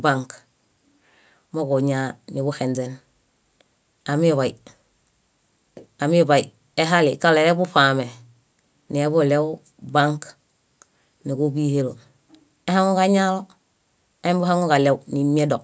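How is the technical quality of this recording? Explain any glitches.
No glitches to report: the speech carries only the ordinary signature of call microphone processing, with the lowest bass trimmed by its high-pass filter and no content above 8 kHz.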